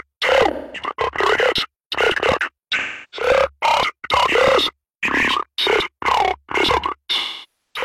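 AAC frame loss with concealment hits three times: 0.52 to 0.84 s, 2.78 to 3.27 s, and 7.17 to 7.84 s. In each gap, compressed frames never reached the decoder. It patched the hole from the last good spectrum, guessing the missing detail. The patches sound smeared, noisy or phasey. Each gap grows longer than the last. The third covers about half a second, which points to roughly a dozen lost frames.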